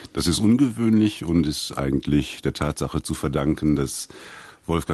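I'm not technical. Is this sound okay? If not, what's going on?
Yes, this sound is okay; nothing has gone wrong with it.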